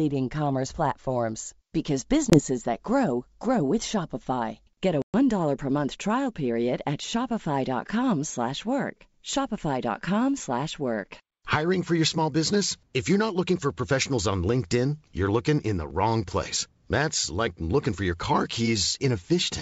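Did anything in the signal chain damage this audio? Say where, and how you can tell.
Yes, packet loss on an ADPCM call at the network stage. At 2.30 s (20 ms, just before "that grow grow with") and 5.02 s (120 ms, several packets), the waveform and spectrogram show hard-edged, full-band silent holes. The decoder's predictor and step size then fall out of step with the sender's, so the sound returns distorted until about 2.39 s and 5.16 s.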